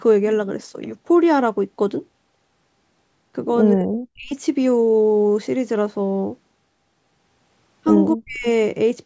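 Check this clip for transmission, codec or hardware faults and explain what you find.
One fault kind appears twice: speech suppressed in double talk. From 3.75 to 4.33 s and again from 8.15 to 8.46 s, the speech drops sharply, by roughly 40 dB at its deepest. About half a second is affected in the first event and about 0.3 s in the second. The likely cause is an echo canceller that, with both sides talking at once, could not separate the near talker from loudspeaker echo and attenuated both. The cut-off above 8 kHz comes from the call's microphone processing, which is working normally.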